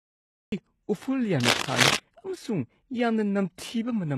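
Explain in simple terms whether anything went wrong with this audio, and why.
Yes, three things went wrong. First, the recording started late, a cut-off start. The opening half second is dead digital silence, and at 0.52 s the speech jumps in mid-sound, with no natural beginning or gentle fade-in to ease into it.

Second, from 1.4 to 1.99 s a rough, uneven scratching and rustling sits on top of the speech and is quite prominent. That is cable scratch noise, likely from a worn cable or connector being moved, which makes its electrical contact flicker rapidly.

Third, the whole clip is heavily squeezed by a low-quality format, likely HE-AAC compression. It keeps only the lower sounds properly and fakes the treble by copying lower parts upward, so the s sounds come out gritty, metallic or lisping.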